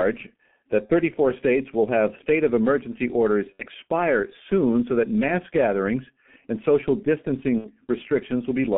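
Throughout the speech, heavy G.723.1 codec damage is present, consistent with its 6.3 kbit/s mode. The voice is muffled and hoarse, with smeared consonants. A spectrogram shows energy confined to about 150 Hz to 3.4 kHz, with an empty band above.

Three VoIP packet losses concealed by the speech codec occur at 0.86 s, 3.53 s and 7.58 s. The first runs about 0.04 s, which fits one lost 30 ms frame. The second follows "state of emergency orders" and lasts about 0.1 s. The third lasts about 0.15 s; each of the last two fits two lost frames. In each gap the decoder repeats its last pitch and filter at falling gain, producing a brief buzzy tone or coloured noise that fades. On a spectrogram this appears as smeared energy, and the waveform envelope tapers before the sound returns weak or distorted.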